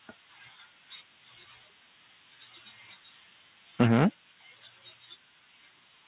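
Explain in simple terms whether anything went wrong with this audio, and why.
Between 3.8 and 4.04 s the loudest part of the speech turns harsh and crackly. That is microphone overload, likely because the input level was set too high, so the peaks ran past what the converter could record and had their tops flattened.

At 3.83 s, right inside that distorted stretch, the speech and background suddenly drop a little in level. That is the microphone volume stepped down, likely the call software reacting to the overload by lowering the input volume in one move.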